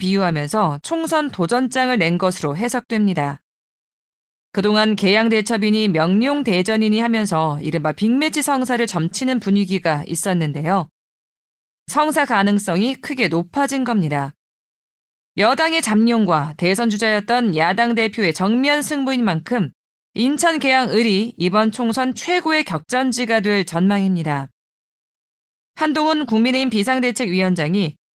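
Throughout, the speech sounds hoarse and slightly robotic. Opus voice compression in hybrid mode codes the excitation coarsely, at a rate that fits about 16 kbps.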